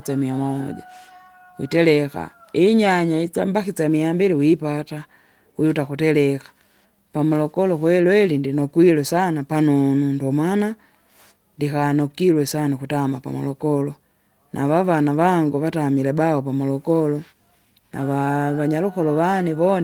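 No technical faults can be heard anywhere in the speech. There is nothing in the recording that needs a timestamp or a repair.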